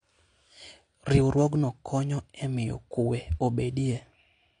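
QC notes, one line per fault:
throughout, AAC compression: the speech has nothing above 9.8 kHz, so sibilants and breath lose their top end and the whole clip sounds dull, with plainly audible coding damage. The likely cause is AAC-LC encoding at a low bitrate, consistent with about 32 kbps. At that rate the encoder runs out of bits for fine spectral detail, so it discards the highest band entirely and quantises what remains coarsely, leaving a smeared, watery texture on the voice.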